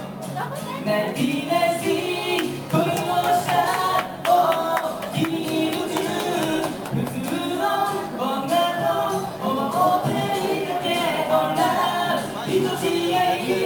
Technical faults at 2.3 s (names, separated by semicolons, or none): none